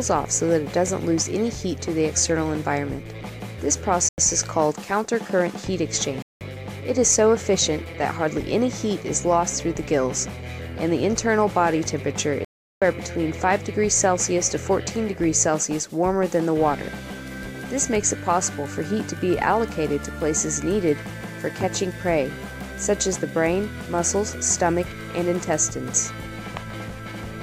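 At 4.09 s, 6.22 s and 12.45 s the audio drops into a block of digital silence lasting about 93 ms, 186 ms and 372 ms, each doubling the last, which fits 4096-, 8192- and 16384-sample output buffers going unfilled. Each hard cut leaves a hole with no fade, with the shortest heard as a short hole and the longest as a clear hole. The waveform shows flat near-silent stretches, and the spectrogram shows blank vertical bands.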